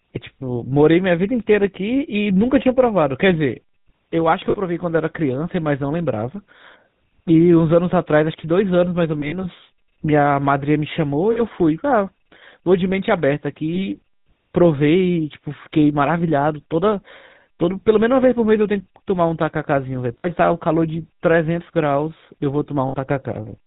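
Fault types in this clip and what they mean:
GSM full-rate codec: The whole speech clip passes through this early mobile codec. Nothing above 4 kHz survives, and voices take on a buzzy, gravelly roughness.
lost GSM frames: Missing frames are patched by repeating the last good one at falling level. Six brief rough, metallic rings occur, between 4.5 and 22.9 seconds.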